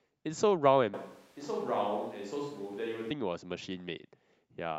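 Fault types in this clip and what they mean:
Switch to a distant microphone: from 0.94 s to 3.1 s the speech abruptly turns roomy and hollow, drops by roughly 5 dB and sits over background noise only about 30 dB below it, likely because the close microphone's signal was lost and a farther one took over. On the waveform the envelope shrinks and smears with reverberant tails. On the spectrogram the low end thins, the noise floor rises and harmonics blur, with hard edges at both switches.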